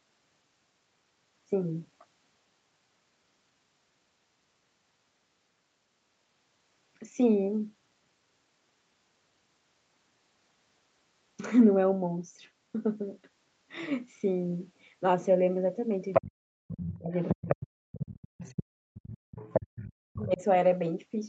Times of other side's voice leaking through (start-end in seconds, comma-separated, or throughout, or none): 16.13-16.22, 16.80-17.55, 18.02-18.14, 18.46-18.63, 19.36-19.91